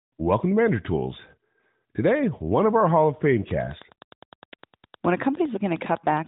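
A speech clip with Wi-Fi interference from 3.51 s to the end. A nearby Wi-Fi radio couples into the audio circuit, which rectifies its beacon. That gives a steady tick every 102.4 ms, about ten a second. It sits roughly 25 dB below the speech.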